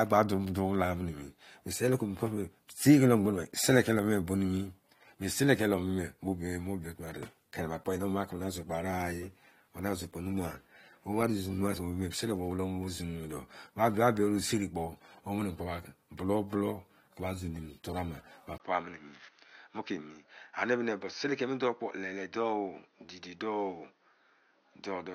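At 18.58 s the speech goes dull and slightly quieter, a few dB down, after a 20 ms gap, with nothing above 6.4 kHz and a new faint noise floor underneath. That's likely the input switched to a poorer device, and it stays that way to the end.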